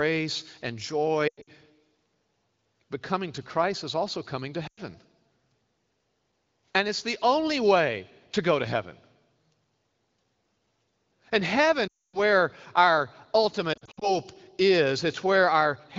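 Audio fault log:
1.28–1.50 s, 4.67–4.80 s, 11.87–12.19 s, 13.73–14.12 s: lost AMR speech frames. Corrupted frames forced the wideband decoder to repeat its last good pitch and vocal tract settings with shrinking gain. The audio smears, warbles, then drops out. The first and last events are broken up over 200 and 280 ms, and the 11.87 s gap runs a solid 260 ms. On a spectrogram, harmonics freeze into flat streaks that fade to blank columns. The waveform shows the envelope decaying, then resuming weakly.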